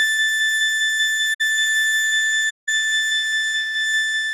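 A music clip with two damaged stretches, at 1.33 to 1.41 s and 2.49 to 2.69 s. This is corrupt frame concealment: the AAC decoder detected damaged frames and muted or patched them, consistent with a few frames lost in the first gap and more in the second.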